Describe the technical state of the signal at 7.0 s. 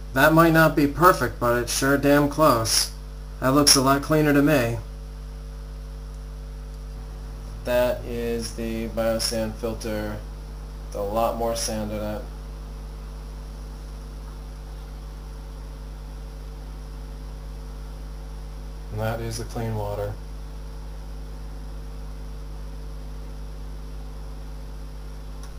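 At 7.0 s, mains hum sits under the sound. A steady 50 Hz tone, running the whole clip, fairly loud. Power-line coupling, likely a ground loop, causes it.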